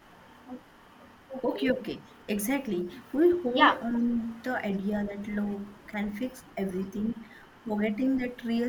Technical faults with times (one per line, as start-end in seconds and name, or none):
3.32-3.39 echo leak
3.52-3.58 speech suppressed in double talk
3.90-4.33 echo leak
4.00-4.05 speech suppressed in double talk
5.32-5.51 echo leak
5.92-5.96 speech suppressed in double talk
6.10-6.15 echo leak
6.97-7.15 echo leak